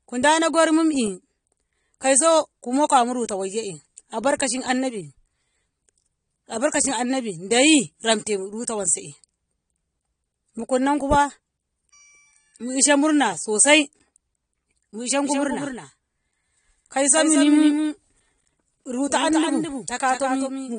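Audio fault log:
throughout: AAC compression. The speech is band-limited, with nothing above 9.7 kHz, and the damage is plainly audible: a dull, smeared tone with a watery warble on vowels and fizzy, blurred sibilants. Because the encoder quantises frequency lines to fit a small bit budget, it likely comes from AAC-LC coding at about 32 kbps. A simple low-pass filter would also remove the top octave but would leave no warbling or spectral holes.
15.25 s to end: doubled audio track. From 15.25 s a second full-band copy of the speech runs about a fifth of a second behind the original, a few decibels quieter, and continues to the end. It most likely comes from the same audio being captured a second time through a slower path. An echo or reverb would decay and take on room colour, but this copy is a single clean repeat that cuts in abruptly.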